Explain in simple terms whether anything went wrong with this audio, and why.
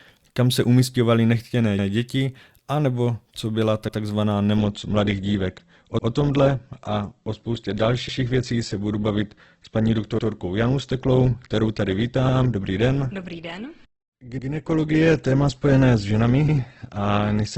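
Two things went wrong. The first is overlapping chunks. The speech was handled in 2-second pieces that each started a little early, so a tenth of a second plays twice at every join. That makes a stutter at 1.79 s (between "kam se umistěvaly nechtěné" and "děti anebo co byla"), 3.89 s (just after "děti anebo co byla"), 5.99, 8.09, 10.19, 12.29, 14.39 and 16.49 s. Unlike a dropout, nothing goes missing; a sliver repeats, at a steady rhythm.

The second is an adaptive stream at a lower bitrate. From 4.57 s to the end, the stream switched to a much lighter version, likely because the connection slowed. The crisp top end above about 8.2 kHz disappears and compression artefacts increase. Unlike a muffled microphone, the change is sudden, with no gap.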